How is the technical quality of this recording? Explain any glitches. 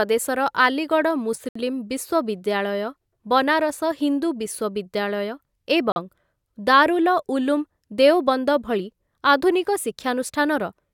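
The speech has two brief dropouts that point to a Bluetooth stall. At 1.49 to 1.56 s the audio cuts to about 67 ms of silence, and at 5.92 to 5.96 s to about 41 ms. Each time the sound stops dead and resumes without a fade. The likely cause is radio interference delaying packets so the headphones' buffer empties and playback pauses until the retransmitted data arrives.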